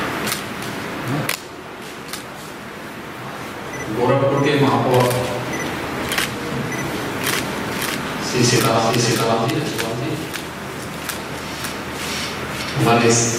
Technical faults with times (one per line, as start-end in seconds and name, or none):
7.28-12.62 doubled audio track